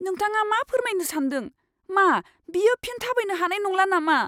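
Nothing technical stands out in this short bit of speech; there's no fault to point to anywhere along it.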